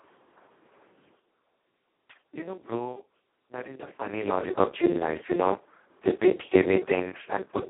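From start to finish the speech carries heavy Speex codec damage. With so few bits for the excitation it sounds hoarse, buzzy and close to robotic, which fits a rate of around 2 kbps. It sits in a 250 to 3400 Hz telephone band, with nothing above 3.9 kHz.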